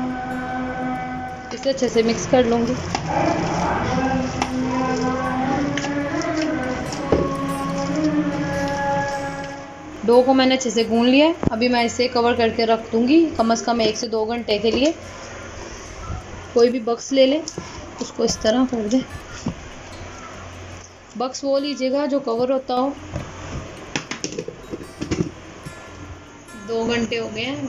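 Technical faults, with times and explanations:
14.03–14.51 s, 16.72–17.09 s, 20.82–22.77 s and 27.06 s to the end: one channel drops out. The sound abruptly sags about 6 dB and then recovers, except the last, which lasts to the end, likely because one stereo channel vanishes before the mono sum.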